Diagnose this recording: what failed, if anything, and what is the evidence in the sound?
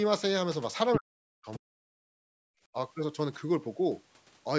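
At 0.93 to 0.97 s a brief scrap of a second voice cuts through the speech, nearly as loud as the talker. The likely cause is the other side's voice leaking through: the call's echo canceller, in the call-processing stage, did not fully remove the far end's loudspeaker playback from the microphone. It lasts only about 40 ms and is a separate voice, not a click or codec glitch in the talker's own speech.

From 0.97 to 1.85 s the talker's own speech sinks deeply, with roughly 0.7 s of that span affected. This is speech suppressed in double talk, likely the echo canceller again: with both sides talking at once, it could not tell the near talker from the loudspeaker echo and attenuated everything. It starts right where the leak ends, which sets it apart from a network dropout, where the audio would vanish regardless of what the far end was doing.

Between 2.13 and 2.7 s the room background falls away by about 40 dB, for roughly half a second, then returns. 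This is background gated by the echo canceller: while the loudspeaker played, the canceller clamped the microphone hard. The background returns when the canceller lets go, so it is a gate and not a noise suppressor slowly pumping. The call microphone path itself, carrying content up to 8 kHz, is not at fault.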